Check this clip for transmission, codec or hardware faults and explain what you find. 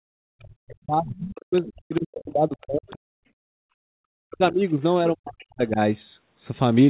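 Two echo-canceller faults show up in this speech, both arising during double talk. The call path's narrow band, which ends near 4 kHz and fits G.711 mu-law at 64 kbps, is expected on such a link.

Speech suppressed in double talk, from 0.0 to 3.0 s, 4.26 to 4.79 s and 5.03 to 5.79 s: the echo canceller likely mistook the talker for loudspeaker echo while both sides spoke, and clamped the signal. The voice sinks by up to about 40 dB.

Other side's voice leaking through, at 1.65–1.73 s, 1.95–2.0 s, 2.61–2.65 s, 2.88–2.97 s and 5.39–5.43 s: the canceller likely left residual loudspeaker sound in the microphone feed. Brief fragments of a second voice surface, roughly 25 to 30 dB below the talker.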